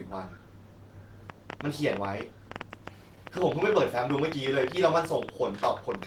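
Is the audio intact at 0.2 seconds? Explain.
No. At 0.2 seconds, as throughout the speech, Opus voice compression is at work. The sound points to a hybrid mode at a low rate of about 16 kbps: a linear-prediction coder handles the band up to 8 kHz, with a transform layer coding the top up to about 20.1 kHz in frames that fit 20 ms. The excitation is coded coarsely, so the voice comes out plainly hoarse and slightly robotic.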